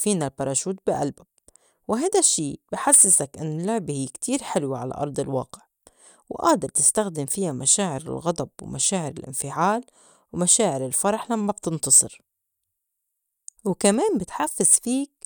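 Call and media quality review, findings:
No faults found; the speech is stable throughout, with nothing needing a ticket.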